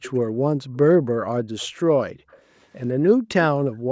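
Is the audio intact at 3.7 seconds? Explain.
No. From 3.53 s to the end, background gated by the echo canceller: suppression during loudspeaker playback drops the room sound by about 40 dB for roughly 0.4 s.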